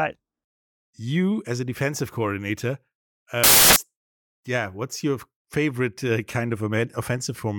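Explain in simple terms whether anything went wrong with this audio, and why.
Something did go wrong, briefly. From 3.44 to 3.76 seconds, the speech is replaced by a burst of loud hiss, like radio static. This is a case of samples built from the wrong bytes. Each tiny slice of sound is stored as a few bytes. Here the player joined those bytes up wrongly. The small, jittery details ended up as the main part of each value. That turns speech into loud, harsh noise for about a third of a second.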